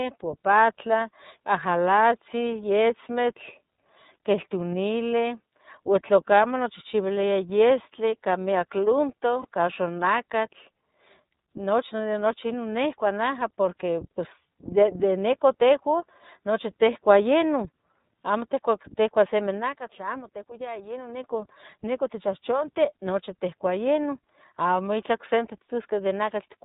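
Throughout, the speech has passed through the iLBC codec, which points to its 30 ms-frame mode at 13.33 kbps. Each frame's excitation is coded on its own, and nothing above 4 kHz survives, so the voice sounds muffled, plainly rough and slightly synthetic.

From 9.41 to 9.45 s, lost iLBC frames, consistent with a single 30 ms packet, made the decoder repeat the last pitch cycle blended with noise. That brief stretch comes out as a held, faintly buzzy vowel, and the voice is right again almost at once after.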